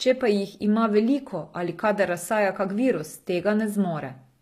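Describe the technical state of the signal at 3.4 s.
At 3.4 s the speech carries audible HE-AAC compression damage, present throughout the clip. The likely cause is a low-bitrate HE-AAC encode. The upper band is rebuilt from copied lower bands, so s sounds turn gritty and lispy. Nothing reaches above 14.9 kHz.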